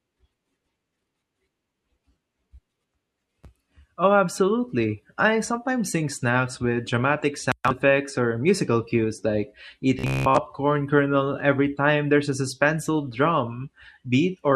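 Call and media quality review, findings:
Robotic sound from repeated short buffers, 9.99–10.38 s, after "or musical cues like", before "kernel every time there's". Rigid metallic buzz at 66.7 Hz, which fits a 15 ms buffer looping. Most real audio in that span skipped. Likely cause: jitter buffer underrun.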